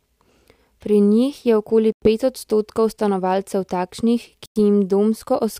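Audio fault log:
1.92–2.08 s and 4.46–4.56 s, Bluetooth stall: The speech cuts to silence twice, for 97 ms and then 101 ms. Each time it resumes abruptly rather than fading back in. The gaps are too short and clean to be pauses in the talking. The likely cause is radio interference delaying packets on the wireless link. The headphones' buffer drains, playback halts, and sound returns once the resent packets arrive.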